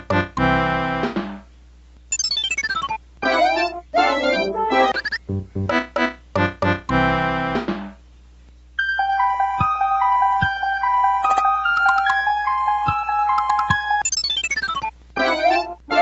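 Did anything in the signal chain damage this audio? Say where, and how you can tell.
No, nothing in the chain damaged this audio. What can be heard is a call path working as expected, with nothing above 8 kHz and the lowest bass trimmed by the microphone processing, which fits a wideband Opus call at around 32 kbps.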